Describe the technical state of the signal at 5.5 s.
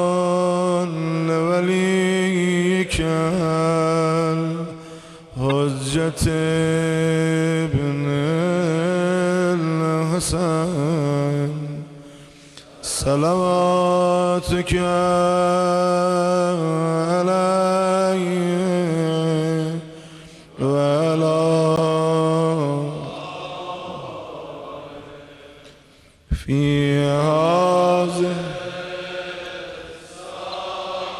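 A corrupt frame was decoded from 5.49 to 5.52 s. Damaged bits in one frame put energy at wrong frequencies, giving a loud, brief chirp-like blip.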